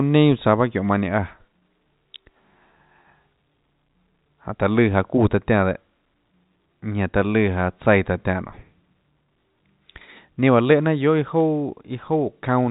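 Nothing stood out on listening to the speech, which comes through the G.711 telephone path with its usual narrow band.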